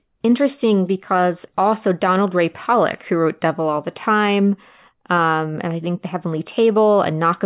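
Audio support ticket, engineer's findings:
No faults found on listening; speech audio checked across its full duration with nothing to report.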